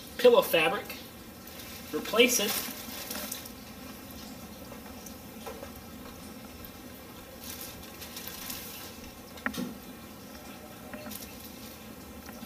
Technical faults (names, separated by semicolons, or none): none